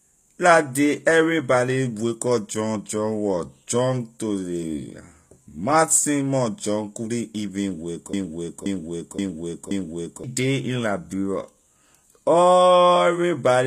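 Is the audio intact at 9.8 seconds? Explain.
No. The playback or stream likely stalled and kept resending the last fragment it held, so from 8.13 to 10.24 s a broken-record loop repeats a 0.53 s piece four times back to back. The sound at 9.8 s is a stuck repeat, and the audio that belonged there is lost.

Underneath, the whole clip likely went through HE-AAC compression at a rate that fits about 24 kbps. The treble is rebuilt from copied lower bands rather than kept, and nothing sounds above 14.9 kHz. The damage is plainly audible, with gritty, metallic s sounds.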